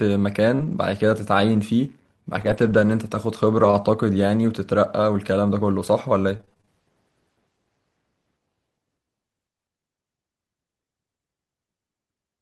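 Scattered short gaps run from 0.55 to 6.69 s, where roughly ten small holes open in the speech, none longer than about 40 ms. About 200 ms of audio goes missing, pointing to packets lost or arriving too late, and the receiver papers over each hole by stretching the last sound forward, reworking 460 ms in all. Only a few percent of that stretch is concealed, so the speech stays clear, broken by brief ticks, smears and hiccups.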